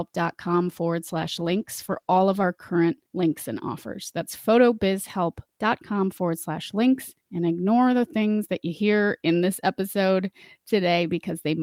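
Speech with a call bitrate drop from 1.01 to 2.51 s: the audio turns coarse and muffled, and a spectrogram shows the upper band thinning, consistent with roughly 32 falling to 17 kbps.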